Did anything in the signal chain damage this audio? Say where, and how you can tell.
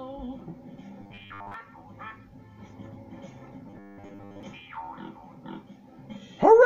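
Yes, the driver or buffer stage likely starved twice, producing robotic sound from repeated short buffers from 1.01 to 1.54 s and from 3.68 to 4.43 s. When new audio failed to arrive in time, the last short block was replayed while most of the real audio was skipped. Both stretches carry a rigid, metallic buzz at 100 Hz. That pitch fits a 10 ms block being looped.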